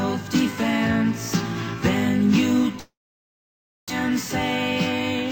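At 2.79 s the sound smears into a brief buzzy continuation that fades within about a tenth of a second, leaving near silence until 3.92 s, when the audio resumes with about 600 ms of material skipped over. This points to a long network dropout, likely: packets stopped arriving, the receiver padded the gap by extending the last sound and then went quiet for nearly a second, and playback picked up later in the stream, shifted by about half a second.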